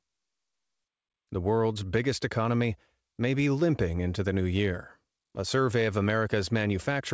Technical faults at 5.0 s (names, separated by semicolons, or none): clock drift between sender and receiver; repeated timing corrections